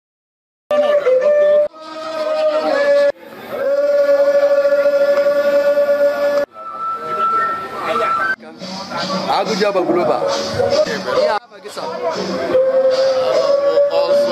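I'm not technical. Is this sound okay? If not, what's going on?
No. Cut-off start, at 0.71 s: the recording began late, so after silence the sound jumps in mid-way, with no natural beginning or fade-in.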